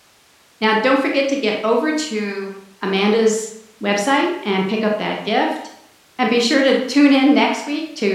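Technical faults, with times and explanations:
No technical faults can be heard in the speech. Nothing in the recording calls for a time or an explanation.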